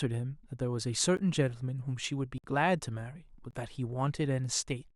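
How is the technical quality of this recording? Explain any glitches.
Three blocks of digital silence break up the speech. At 1.17 s a 13 ms block is heard as a tick. At 2.38 to 2.44 s a 58 ms block leaves a short hole. At 3.51 to 3.53 s a 23 ms block, which fits a 1024-sample buffer, cuts out the sound. In each case the output buffer most likely wasn't filled in time, so samples dropped straight to zero, with abrupt edges and no fade.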